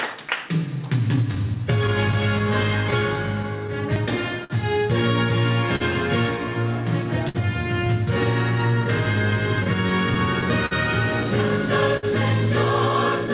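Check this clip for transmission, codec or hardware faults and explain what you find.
Several timing and packet faults show up, and the sender's clock runs slow. The band stops around 4 kHz, which points to a G.711 mu-law call path.

Clock drift between sender and receiver runs throughout. The sender's clock is roughly 4% slow, so the jitter buffer keeps draining and has to keep compensating, which you hear as recurring hiccups.

Repeated timing corrections run from 1.15 to 4.03 s. The receiver stretches the audio to about 99% speed, adding a few tens of milliseconds.

Scattered short gaps appear from 1.35 to 4.52 s (about ten) and from 8.61 to 10.73 s (about seven). Each hole, up to about 50 ms, gets patched by extending the previous sound. You hear small ticks and smears.

Short stalls from a late packet occur at 5.76 to 5.82 s (43 ms), 7.29 to 7.37 s (56 ms) and 11.97 to 12.05 s (58 ms). 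Each time the buffer ran dry, so the last sound is held a bit too long with a slight buzz or dip.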